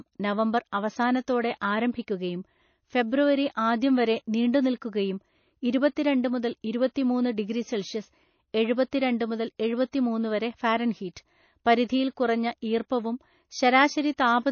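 From start to finish the speech has most likely been through MP3 compression at a bitrate too low for it, around 28 kbps judging by the damage, so the encoder ran short of bits. It cut the treble outright, leaving nothing above 6.6 kHz, which dulls the s sounds, and it dropped quieter frequency lines that flicker in and out between frames. The result is a plainly audible watery, swirling texture, with smeared consonant attacks.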